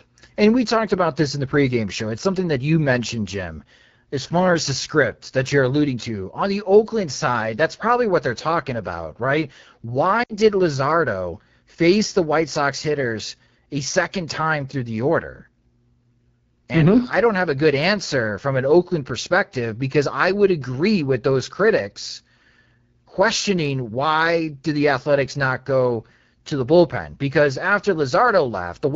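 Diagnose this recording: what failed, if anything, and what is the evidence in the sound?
The codec stage is at fault throughout: the speech carries the rough, raspy texture of the AMR wideband (HD Voice) codec at 8.85 kbit/s, one of its lowest rates. Coding damage is plainly audible across all 29 seconds. At this rate the encoder has too few bits to model the pulse excitation feeding its vocal tract filter, so voiced sound turns grainy. Content above 6.4 kHz is only synthesised noise, which adds a hiss-like sheen rather than real detail.

A network-side dropout from lost AMR speech frames occurs between 10.23 and 10.36 s. The sound smears and sags in level for about 60 ms, which fits three consecutive 20 ms frames failing their checks. The decoder concealed the gap by repeating the last good pitch and filter settings with a falling gain, so the sound holds on and fades rather than cutting off cleanly. 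It resumes briefly weak and rough afterwards.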